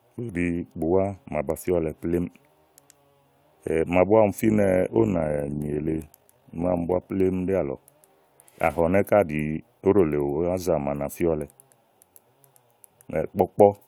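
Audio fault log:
4.40–7.07 s, overlap-add ripple: the speech level pulses by about 6 dB around 50 times a second, a rough flutter because reassembled frames overlap without summing to constant gain. It is locked to the frame rate and doesn't vary, unlike a slower, smooth tremolo.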